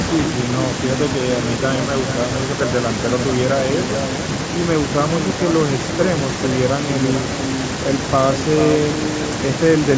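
Throughout the speech, every phrase is trailed about four-tenths of a second later by a thinner copy only about 8 dB quieter: echo with no canceller. The far end's loudspeaker output reached its microphone and returned across the network unremoved, alongside the call microphone processing's 8 kHz bandwidth.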